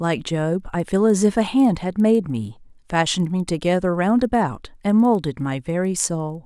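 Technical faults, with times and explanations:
Throughout, resampler restarted on every block: each 50 ms block was converted alone, leaving edge errors that tick at 20 Hz whenever speech is present.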